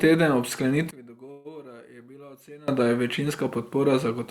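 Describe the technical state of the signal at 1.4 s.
At 1.4 s the speech sits inside a stretch heard from 0.91 to 2.68 s, starting after "teden ob" and ending before "da je", where it falls about 24 dB and turns faint. This is one channel inverted, likely one stereo side with flipped polarity, so the shared centre content cancels when the two sides are summed to mono, leaving only their small difference. Unlike a plain gain drop, nearly all of the sound cancels while a faint, phasey residue remains.

Within that stretch, from 1.31 to 1.47 s, a call audio freeze holds the last sound as a fading buzz or hiss for about 135 ms. This is likely a jitter buffer running dry while packets were delayed in transit. The speech then resumes exactly where it stopped, with nothing skipped and everything after it arriving 135 ms late. That separates it from packet loss, where the filler replaces audio that never comes back.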